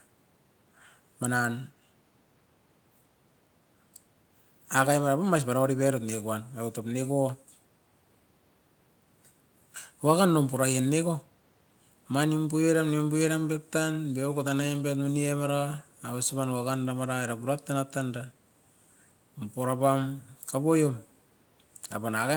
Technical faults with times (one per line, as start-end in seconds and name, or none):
none